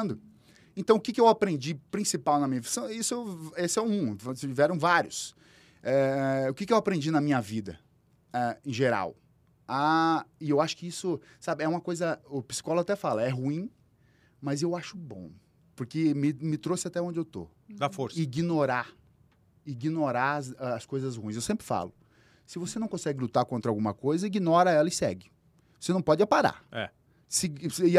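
No technical faults can be heard anywhere in the recording. There is nothing to mark at any point in time.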